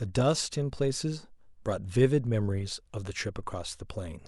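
A speech recording with no technical faults to point to anywhere in the signal.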